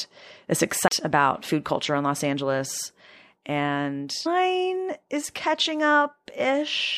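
Right near the start, at about 0.88 to 0.91 s, there's a CD skip: the speech drops out for roughly 30 ms with a little tick, then carries on from a different point, as if the laser got knocked onto another turn of the disc's spiral. Later, at 4.25 s, the speech jumps ahead with a small blip and a chunk seems to be missing. That's most likely a stream segment skipped, where one piece of the stream never loaded and the player went straight to the next.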